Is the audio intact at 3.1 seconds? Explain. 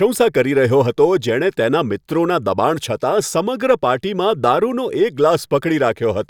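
Yes, the audio at 3.1 seconds is intact, with no audible fault at that moment.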